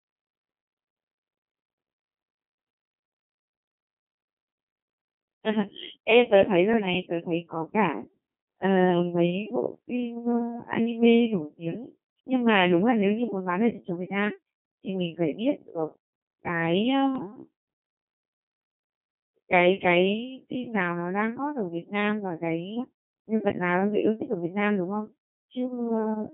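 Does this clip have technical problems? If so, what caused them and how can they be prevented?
Yes. The whole clip has passed through a Codec 2 vocoder, at 2.4 kbit/s. It fits inside a narrow band of about 150 Hz to 3.6 kHz. The codec sends only pitch, voicing, level and a rough spectral shape. The decoder then rebuilds the speech from sine waves. The original waveform is lost. So the speech sounds heavily robotic and buzzy throughout. Prevention: use a higher-bitrate speech codec wherever the link can carry it.

There are also bit errors on digital voice radio, from 17.16 to 17.32 s. For about 0.16 s the synthetic speech jumps in pitch, level and tone. It breaks into warbles and bleeps. The error rate sounds like around five percent. At this low bitrate, each bit helps set a whole frame. The damage points to several consecutive frames being corrupted. Prevention: keep a stronger signal margin, or add error protection to the vocoder bits.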